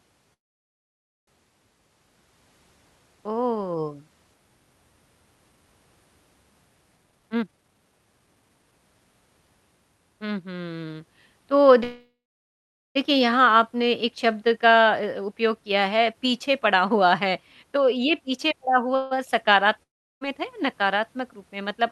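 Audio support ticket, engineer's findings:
Call audio freeze at 0.33–1.29 s, 11.83–12.97 s and 18.95–19.13 s. Brief fading buzz, then near-silence in the first two. Likely a jitter buffer underrun from held packets. Speech resumes intact, just delayed.

Jitter buffer speed-up at 6.97–8.79 s, 151% speed, about one second trimmed. Milder at 16.13–18.57 s, 107%, about 0.2 s trimmed. Pitch unchanged, speech hurried. Buffer dropping pitch periods to cut accumulated delay.

Long network dropout at 19.83–20.23 s. Short concealment fade, then silence. Likely lost packets over the Opus call path. Roughly 0.38 s of speech never played.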